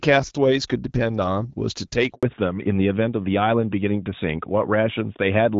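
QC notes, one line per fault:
2.15 to 2.23 s, handover gap: the call switched networks and no speech frames reached the receiver during the changeover, so the speech fades out within a few tens of milliseconds and leaves 80 ms of silence until the new link delivers audio again.
2.23 s to end, fallback to narrowband: after the handover the call left HD Voice for an older narrowband codec, consistent with AMR-NB at 12.2 kbit/s. The wideband band present earlier is gone, with nothing above 4 kHz, so the speech turns duller and rougher.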